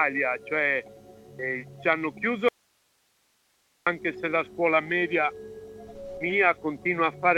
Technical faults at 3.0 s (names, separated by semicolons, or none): audio dropout to a faint residue